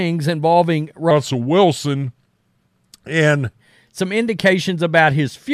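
A section at the wrong speed runs from 1.11 to 3.60 s in this speech, just before "some indications", slowed to 0.86× and about three semitones deeper, likely from resampling against the wrong clock.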